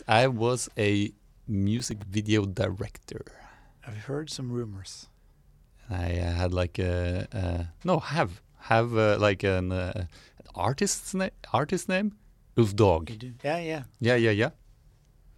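From 1.77 to 2.02 s, processor overload crackle: a run of missed few-millisecond buffers leaves tiny silent gaps, a gritty burst rather than one dropout.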